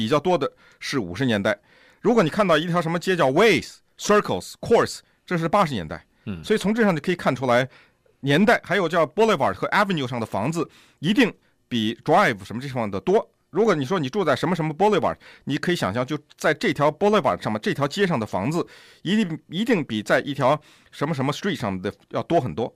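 No technical faults can be heard anywhere in the speech. Nothing in the recording calls for a timestamp or a closer listen.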